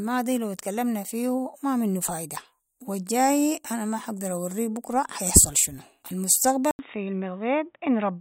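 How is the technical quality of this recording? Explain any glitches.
The speech has one glitch, near the end. At 6.71 s, after a brief 80 ms gap, the sound turns dull and a little quieter until the end. Nothing remains above 3.8 kHz, and faint new background noise appears. The likely cause is an input switched to a poorer device.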